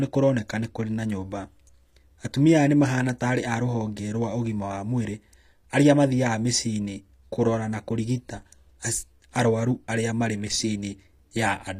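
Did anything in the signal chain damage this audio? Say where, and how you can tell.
Yes. Throughout the speech, the s sounds come out gritty and metallic, and the treble is synthetic, with nothing above 15.5 kHz. That points to the codec stage, likely HE-AAC at a low bitrate around 24 kbps, rebuilding the treble by copying lower bands upward.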